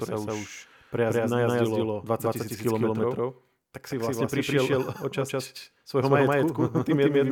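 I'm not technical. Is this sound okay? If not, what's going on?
No. A doubled audio track runs through the whole clip: the speech plays twice, with a second copy about 0.15 seconds behind and roughly as loud. This is likely from the sound being captured again through a slower path, or from an edit holding two misaligned copies.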